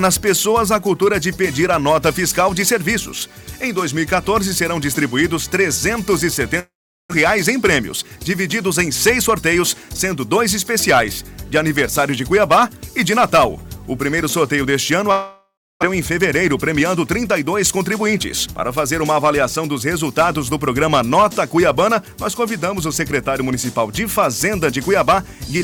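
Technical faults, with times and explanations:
6.59–7.13 s, long network dropout: the sound turns into a fading buzz, then about 400 ms of silence before it resumes with a piece missing. No audio likely arrived for this stretch, so the receiver stretched the last sound and then gave up, skipping roughly 400 ms.
7.52–8.86 s and 9.29–9.91 s, jitter buffer speed-up: the audio runs slightly hurried at unchanged pitch, about 4% and 5% fast. After the gap, late packets arrived together and overfilled the buffer, so the receiver trimmed short pitch-period pieces, roughly 110 ms in total.
15.11–15.85 s, long network dropout: again a decaying buzz gives way to about 310 ms of silence, and the sound picks up further on with roughly 400 ms gone. Packets likely stopped arriving, and the concealment faded out before the stream returned.
16.10–19.14 s and 19.63–21.11 s, jitter buffer speed-up: a noticeably rushed stretch at about 7%, then a milder one at about 5%, with pitch steady throughout. 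The receiver cut repeated pitch-period slices, around a fifth of a second over the first run, to shed the delay built up after the dropout.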